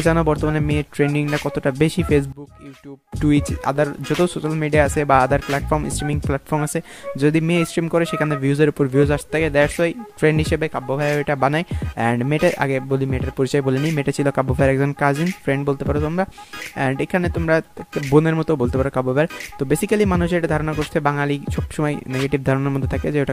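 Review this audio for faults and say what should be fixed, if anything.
From 2.32 to 3.12 s the sound abruptly goes faint and falls by about 19 dB, with centred content and low end nearly gone. The likely cause is one channel inverted: one stereo side has reversed polarity, so shared material cancels when summed to mono. To prevent it, check each channel's polarity and audition the mix in mono before export.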